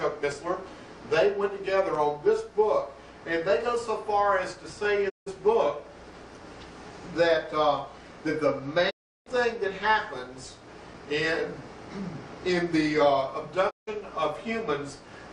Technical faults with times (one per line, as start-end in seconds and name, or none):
5.08-5.28 digital broadcast dropout
8.89-9.28 digital broadcast dropout
13.69-13.89 digital broadcast dropout